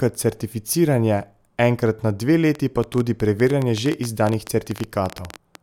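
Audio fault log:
2.55 to 5.56 s: train of clicks, starting just after "certificiranje enkrat na dve" and running almost to the end of the speech. Roughly forty near-identical pulses arrive at an uneven pace, averaging about 11.3 per second, and stand well above the signal, peaking around 10 dB over it. They tick through the speech and pauses alike because they come from outside the recorded sound, likely interference from nearby equipment or a faulty connection or power supply repeatedly injecting the same spike.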